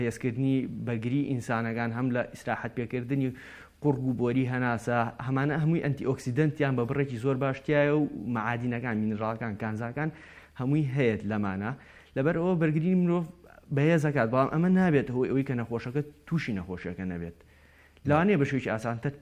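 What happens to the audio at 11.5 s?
Nothing goes wrong at 11.5 s; the audio runs on intact through that moment.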